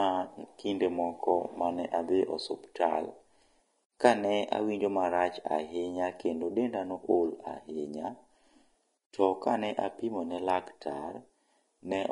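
From start to finish, the speech has a grainy, hissy edge. Nothing is heard above about 10.6 kHz. The likely cause is Vorbis compression at a low setting, which fits a bitrate around 32 kbps. At that rate the encoder drops the top band and codes the remaining treble very coarsely. Fine detail there is swapped for noise of similar energy. Consonants sound smeared, attacks lose their sharpness, and voiced tones take on a rough texture.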